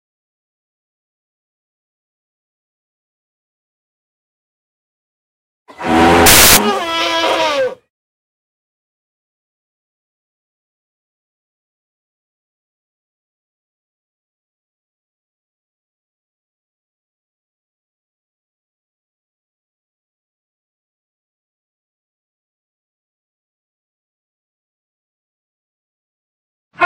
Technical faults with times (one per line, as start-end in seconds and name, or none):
6.26-6.57 samples built from the wrong bytes